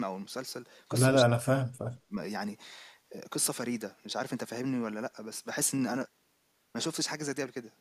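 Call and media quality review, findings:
Speech suppressed in double talk: level dips at 1.26 to 1.51 s (deepest drop around 40 dB) and 2.07 to 2.13 s (around 20 dB). Likely echo canceller attenuating near-end speech while the far end talks. Drops are gain dips, not packet-loss gaps or concealment artefacts.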